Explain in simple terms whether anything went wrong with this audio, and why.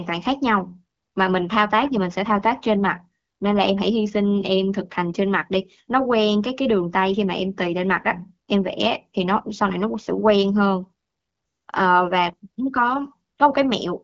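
Nothing stood out as wrong on listening; the speech carries the slightly narrowed, phone-call quality of HD Voice calling, with nothing heard above about 7 kHz.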